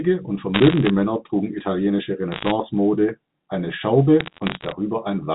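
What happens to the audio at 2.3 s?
From 2.32 to 2.51 s the speech picks up a burst of crackle from bit errors on a digital phone line. On this G.711 mu-law link, flipped bits each corrupt a single 8-bit sample, and when the sign or a high-order bit is hit, that sample jumps far from its true value and produces a sharp tick. At an error rate of roughly one percent, the ticks cluster into crackle over unchanged, telephone-band speech.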